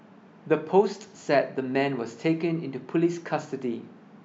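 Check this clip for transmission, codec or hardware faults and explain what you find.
No technical fault can be heard anywhere in the speech, and the signal stays continuous and intact throughout.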